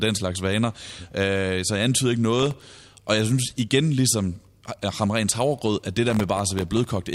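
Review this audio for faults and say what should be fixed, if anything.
Processor overload crackle at 2.39–2.81 s, after "så jeg antyder ikke", and 6.10–6.97 s, after "havregrød at det": dozens of sub-millisecond buffers dropped to silence, giving dense gritty crackle, unlike a single isolated click. Reduce processing load or enlarge the audio buffer.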